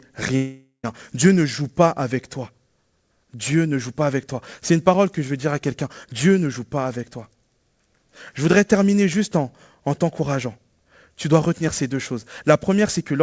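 From 0.36 to 0.85 s the sound smears into a fading buzz, then briefly goes quiet. That's likely a long network dropout, losing about half a second.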